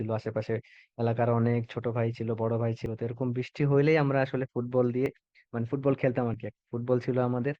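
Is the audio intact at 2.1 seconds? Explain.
Yes, at 2.1 seconds the speech runs through cleanly, with no dropout, click, glitch or other fault to be heard at that moment.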